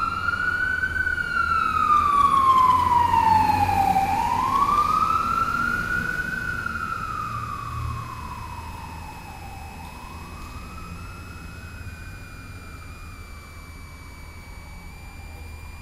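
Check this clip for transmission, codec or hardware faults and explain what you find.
One hardware fault runs through the whole clip: a switching supply whistle. From start to finish, a high tone sits under the everyday sounds, moving within about 2.26 to 2.59 kHz, at roughly 25 dB below the wanted audio. A switching power supply feeding the recording chain is either running in an audible burst mode or beating against a second supply, and that interference leaks into the signal. Mains hum would be far lower, locked to 50 or 60 Hz and its harmonics. Acoustic feedback would swell and ring. This tone instead stays high, quiet and continuous, and its pitch shifts within that band.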